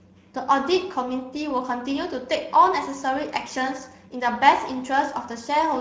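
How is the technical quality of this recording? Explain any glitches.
The quality is poor. Throughout, the speech went through the Speex codec at a low-to-middle setting, around 17 kbps. Too few bits for the excitation leave the voice plainly noisy and hoarse.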